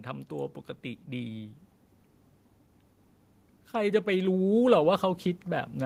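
From 3.72 s to the end at 5.85 s, automatic gain rising sets in: the gain control judged the input too quiet and steadily increased amplification, so the speech and the background noise swell together over about two seconds rather than jumping.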